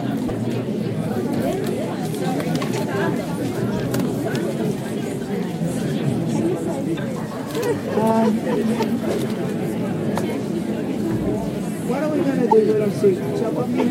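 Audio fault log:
0.28–0.31 s, 6.96–6.99 s, 12.50–12.53 s: broken MP3 bit reservoir. Each time, frames were likely dropped, so the following frame borrowed reservoir bytes that belonged to other data. The audio jumps ahead with a disturbance about 30 ms long, roughly one 26.1 ms frame.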